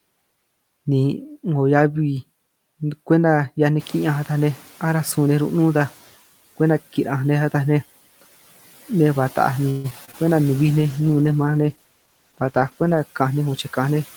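From 3.79 to 5.98 s, as the room noise jumps by about 15 dB near 4 s, the noise suppressor is catching up. The noise comes through with less reduction at first, then fades by about 8 dB over 2.2 s, visible as haze thinning on a spectrogram.

Between 9.69 and 10.24 s, repeated packet loss produces choppy, robotic sound. Four gaps, the longest 147 ms, are patched by stretching earlier sound, leaving smeared, repetitive harmonic bands and brief flat dropouts in the waveform.

From 10.59 to 13.08 s, a call bitrate drop makes the sound rough and muffled, consistent with the bitrate falling from about 32 to 14 kbps. On a spectrogram the upper frequencies vanish abruptly and the remaining detail looks blotchy.

From 13.22 to 14.01 s, a jitter buffer speed-up trims short pitch-period pieces, about a tenth of a second in total. The sound runs roughly 10% faster at unchanged pitch, and the waveform shows compressed syllable spacing.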